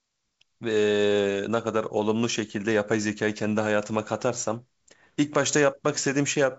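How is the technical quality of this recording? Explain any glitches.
Nothing stood out on listening, and the speech comes across as wideband telephone audio consistent with G.722 coding, with nothing above roughly 7.7 kHz and no glitches to point to.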